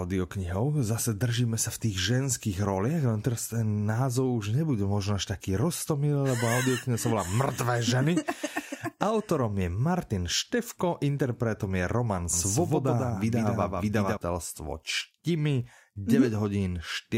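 From 12.33 to 14.17 s the speech doubles: a second copy trails by roughly 150 ms, a bit quieter, likely a doubled audio track from a slower capture path.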